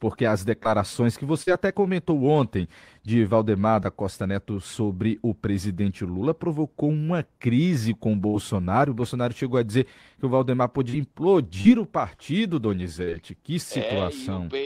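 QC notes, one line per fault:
0.63–0.67, 1.43–1.49, 10.90–10.95, 11.61–11.67, 13.05–13.09 s: short concealed packet loss. Packets carrying 20 to 40 ms of speech arrived too late. The receiver extended the preceding sound for 12 to 43 ms and blended back, leaving brief smears or wobbles. The 11.61 s gap falls just before "o partido", and the 13.05 s gap just after "o partido".
8.27–8.36 s: burst of packet loss. Right after "uma crise com o", a burst of consecutive packets was lost, so about 60 ms of speech never arrived. The receiver stretched the last sound across roughly 66 ms as a fading buzz or hiss, then jumped ahead with that stretch missing.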